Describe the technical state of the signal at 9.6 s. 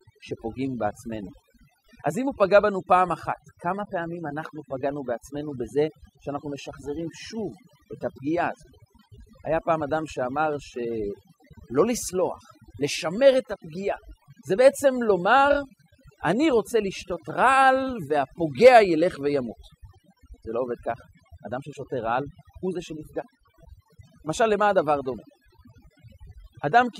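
USB whine runs through 9.6 s, as it does across the whole clip. The bus's 125-microsecond microframe current pulls are leaking into the audio path through power or ground, producing a fixed-pitch whine based at 8 kHz with its strongest component at the 16 kHz multiple. It sits at roughly 25 dB below the speech, a thin, steady high-pitched edge that does not follow the talker.

Overdone noise removal is also present at 9.6 s and throughout. The noise reducer was set too aggressively, so it drives individual frequency bands down or off whenever they come close to its noise estimate, and the quieter parts of the speech are removed along with the noise. The background drops and breaks up into twinkling specks.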